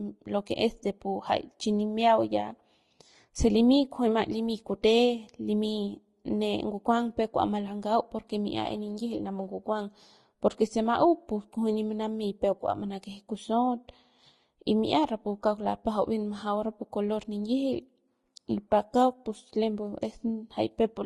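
Transcoding between lossy codecs runs throughout this speech recording. There is no content above 12 kHz, and two layers of coding artefacts sit on top of each other: smeared, watery detail, with a grainy roughness added on top. This points to a first pass at low bitrate, sounding like Vorbis near 34 kbit/s, that was likely re-encoded by Opus around 32 kbit/s. The second encoder wasted its bits reproducing the first one's damage and then added its own, while the lower bandwidth limit carried through.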